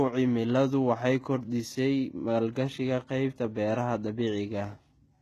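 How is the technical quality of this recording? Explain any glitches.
The speech is affected throughout by what is likely HE-AAC compression, and the damage is plainly audible. The encoder coded only the lower spectrum and rebuilt the treble by copying lower bands upward under a coarse envelope, which fits a very low bitrate of around 16 kbps. Nothing exists above 12.3 kHz. The synthetic top end keeps some brightness, but its harmonics don't align with the real ones, so s sounds come out gritty, metallic or lispy.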